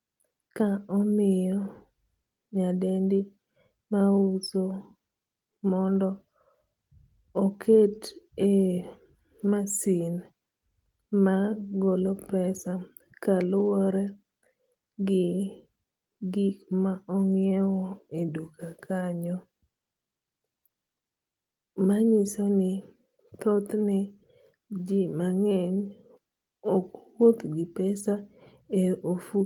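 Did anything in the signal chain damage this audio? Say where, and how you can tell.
No, nothing in the signal chain audibly damaged this speech recording. No stage from capture through to playback leaves a mark that can be heard.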